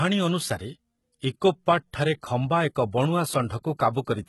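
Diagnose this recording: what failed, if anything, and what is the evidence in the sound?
Codec stage, throughout: s sounds are gritty and lispy, and the treble sounds copied upward rather than real. This is likely HE-AAC compression rebuilding highs at a rate fitting roughly 16 kbps.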